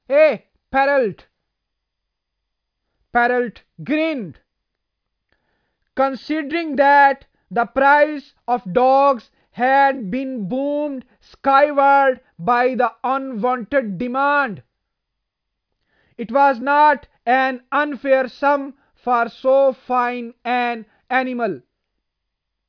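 A speech recording, and nothing is technically wrong with it.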